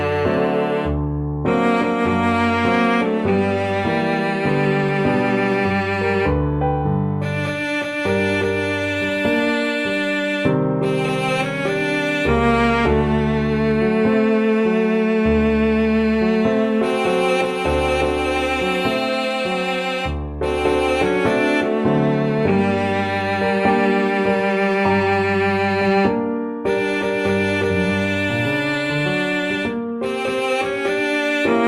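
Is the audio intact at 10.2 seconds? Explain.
Yes, the audio is intact at 10.2 seconds, with no dropout, glitch or other fault at that moment.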